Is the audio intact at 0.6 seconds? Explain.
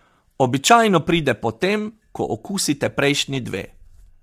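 No. At 0.6 s, as throughout, the speech sounds rough and grainy, likely from low-delay AAC compression around 32 kbps; a spectrogram shows blurred harmonics with noise filling between them.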